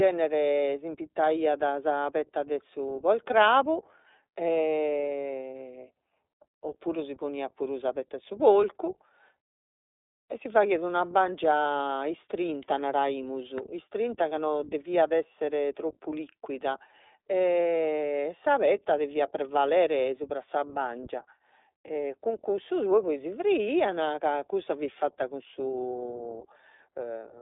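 From start to end, the iLBC codec narrows the speech to about 300 Hz–3.7 kHz. Each frame is coded separately, fitting 20 ms frames at 15.2 kbps. Sound is rough and synthetic.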